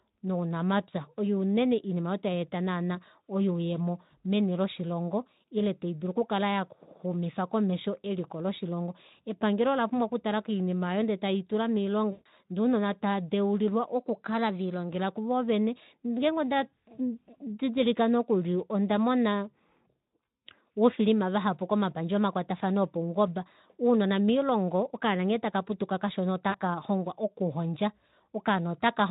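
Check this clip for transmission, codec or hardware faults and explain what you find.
Two kinds of transmission fault appear in this speech, both in the stretch carried through what sounds like a mid-rate Speex link, whose light codec roughness is present throughout.

VoIP packet loss concealed by the speech codec occurs twice: from 12.11 to 12.27 s and from 26.50 to 26.58 s. Packets failed to arrive, so the decoder kept regenerating sound from the last pitch and spectral envelope it had, turning the gain down with each substituted frame. The gaps span 140 ms and 40 ms, which fits roughly seven and two 20 ms frames. In both gaps the speech is stretched into a buzzy tone or coloured noise that fades, and it stays weak or distorted for a while after real audio resumes.

A drift correction step runs from 13.95 to 14.89 s. Clock-matching software likely altered the playback rate in a single jump to rebalance its buffer. 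The audio runs 5.6% fast for just under a second, raising the pitch by about 95 cents, nearly a semitone.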